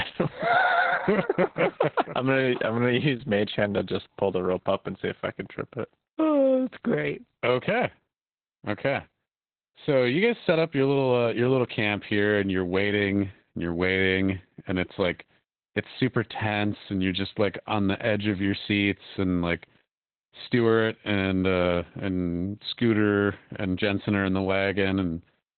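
From start to finish the speech carries Opus voice compression, heavily damaged. It sounds like narrowband SILK coding at roughly 8 kbps, with a coarsely coded excitation that leaves the voice muffled, hoarse and faintly robotic. The coding runs in 20 ms frames. A spectrogram shows the band cut off near 4 kHz, with nothing above about 16.7 kHz, and blurred, blocky harmonics where the excitation was simplified. The waveform looks smoothed, with softened transients.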